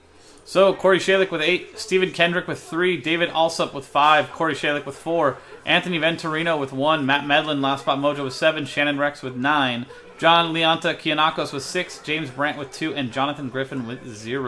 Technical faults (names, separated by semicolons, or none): none